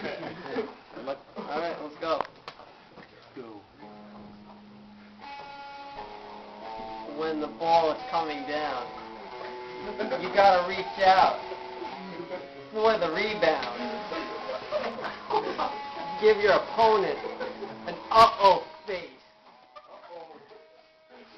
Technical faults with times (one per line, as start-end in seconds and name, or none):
none